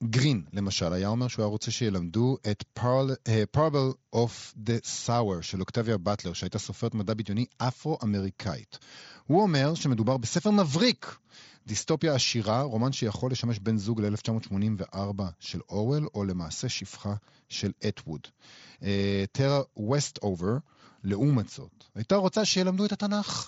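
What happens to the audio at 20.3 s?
Nothing goes wrong at 20.3 s: the speech there comes through intact, carried as before by the Bluetooth mSBC headset codec with its band ending near 7.7 kHz.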